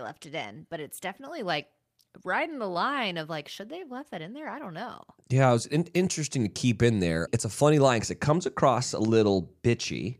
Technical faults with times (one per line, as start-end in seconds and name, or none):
none